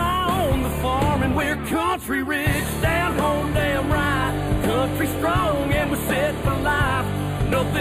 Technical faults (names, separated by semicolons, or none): channel delay (comb filtering)